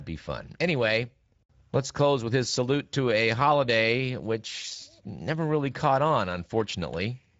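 From start to end, the speech carries Speex codec damage: the CELP coder has too few bits for the excitation, leaving voiced sound plainly noisy and hoarse, consistent with a rate near 16.8 kbps. Nothing is present above 7.7 kHz.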